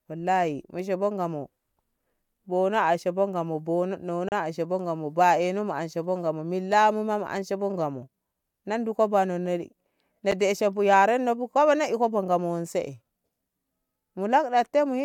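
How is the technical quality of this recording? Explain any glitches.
The speech is interrupted twice by a gap between stream segments. The first comes at 4.29 to 4.32 s. The second is a brief hole at 10.31 s, just before "deshe bu yarenno bu". The stream arrives in 6-second segments whose time stamps don't quite meet. The player fills each gap with silence, adding about 32.5 ms and then 9 ms. Each gap is a hard-edged dropout. Nothing is lost, just paused.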